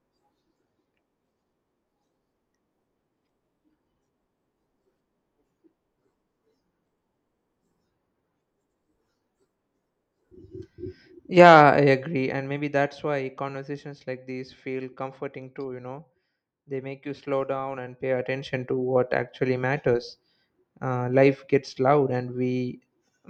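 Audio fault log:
11.63–13.19 s and 17.76–18.55 s, zipper noise: a drop of about 10 dB before "conversations like these feel", then a rise of about 10 dB between "make you slow" and "to what actually matters", both stepped roughly 40 times a second without smoothing. Each step clicks, so a fine ticking rides on the sound while the level moves. A smooth fader move would be silent.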